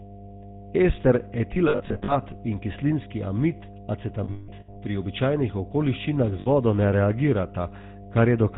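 A steady low tone sits under the whole clip. It is mains hum at 50 Hz, about 20 dB below the speech. A ground loop or nearby transformer has let the power line leak into the signal, with a few low harmonics on top.

The speech is also buzzy and gravelly throughout, with nothing above 4 kHz. That is the GSM full-rate codec, and the damage is plainly audible. The sound fits its 13 kbps coding, which rebuilds the voice from a vocal-tract model driven by sparse, regular pulses.

From 1.54 to 2.18 s come lost GSM frames. The gaps are scattered and short, at most about 70 ms each. The decoder repeats the last good frame at falling level, so the speech turns into a rough, metallic ring. From 4.24 to 4.77 s the losses are longer. One run lasts about 200 ms and rings. A brief ringing blip follows from 6.40 to 6.48 s.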